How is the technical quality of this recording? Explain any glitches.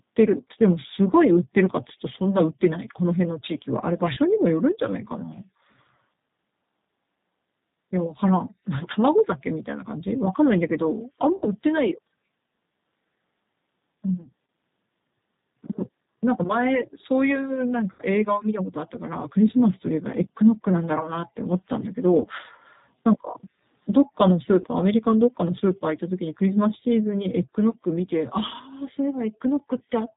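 The technical quality is limited: the speech is band-limited and roughened throughout by low-bitrate codec coding, and it is briefly smeared by six dropouts.

Throughout, the sound is muffled, slightly rough and synthetic, with nothing above 4 kHz. This is the G.729 codec at 8 kbit/s, which rebuilds speech from a filter model and sparse pulses, so the damage is plainly audible.

At 4.14, 11.36, 14.22, 17.93, 22.21 and 24.61 s, the sound briefly turns into a fading smear. These are VoIP packet losses concealed by the speech codec. The gaps are 30 ms at 4.14, 14.22, 22.21 and 24.61 s, and 60 ms at 11.36 and 17.93 s. The decoder extrapolates from its last frame, and the speech stays weak slightly beyond each gap, with the whole disturbance lasting about 0.11 s at 11.36 s.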